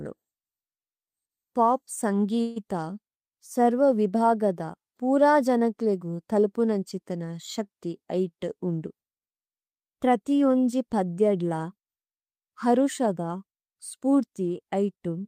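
At 2.41 s the speech stalls for about 0.17 s, to 2.58 s: the last sound is drawn out into a fading buzz or hiss rather than dropping to silence, and then the talker resumes exactly where they left off, with nothing skipped. This is a call audio freeze, likely caused by packets being held up in transit so the jitter buffer ran dry; the receiver filled the 147 ms wait, leaving everything after it running that much later.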